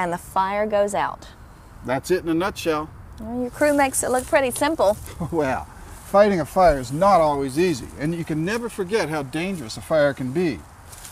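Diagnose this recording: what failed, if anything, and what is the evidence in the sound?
Nothing failed in this recording, and the sound offers no evidence of any fault.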